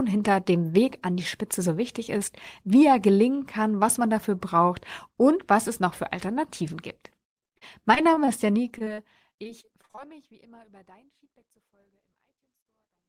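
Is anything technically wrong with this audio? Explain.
Yes. Repeated packet loss (robotic sound) occurs from 7.43 to 8.99 s and again from 9.43 to 9.99 s. Lost or late packets left holes of up to 40 ms, each patched by stretching the preceding sound, so the speech turns choppy with pieces missing while a smooth fade-out sets in around 8.5 s.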